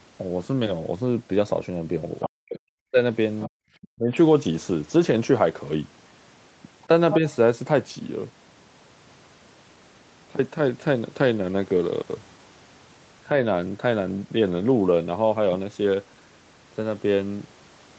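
Speech, with brief bursts of the other side's voice leaking through at 2.21–2.29, 3.40–3.49, 3.82–3.86 and 6.82–7.17 s. These bursts are likely residual loudspeaker echo that the echo canceller missed. Most sit well below the talker, but the last comes close to speech level. On a spectrogram they show as separate harmonic traces overlapping the talker's. Speech is also suppressed in double talk at 2.26–2.98, 3.47–3.58, 3.93–4.14 and 7.18–7.25 s. There the canceller likely turned the talker down along with the echo, by as much as about 40 dB in the first three and only slightly in the last. The waveform shows these as sudden dips or near-gaps in the envelope.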